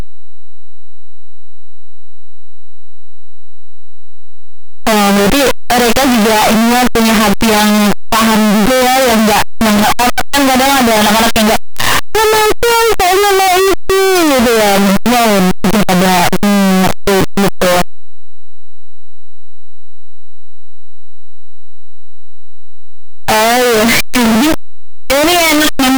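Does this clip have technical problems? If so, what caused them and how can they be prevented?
Yes. Signed and unsigned mixed up, throughout: loud, harsh distortion with quiet parts as loud as the rest, likely from 8-bit samples read with the wrong sign convention. Each zero crossing then jumps the whole range. To prevent it, declare and check whether samples are signed or unsigned wherever 8-bit audio is written or read.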